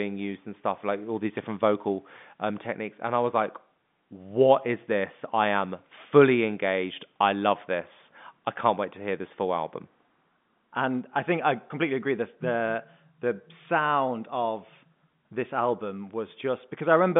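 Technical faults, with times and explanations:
No technical faults are present: the signal is narrowband telephone speech, which fits G.711 A-law telephone coding, with the line passing roughly 150 Hz to 3.6 kHz, nothing above about 3.8 kHz, and at most a faint trace of the codec's level-following quantisation noise.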